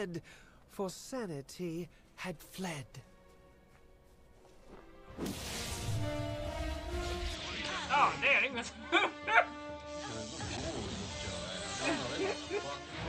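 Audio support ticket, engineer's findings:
From 7.35 s to the end: sound turns duller and a few dB quieter, with nothing above 8.3 kHz and a new low noise floor underneath. No gap at the change. Likely an input switched to a poorer device, its narrower band and own noise taking over.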